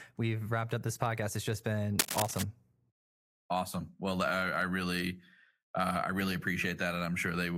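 From 1.99 to 2.42 s, a dense, uneven scratching rustle sits over the speech at roughly its own level: cable scratch noise, likely from a worn cable or connector being moved.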